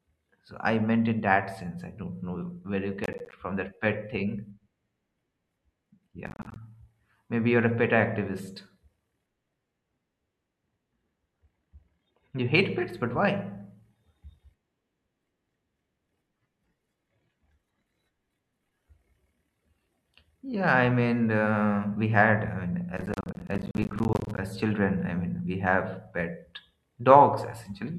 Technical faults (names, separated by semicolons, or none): processor overload crackle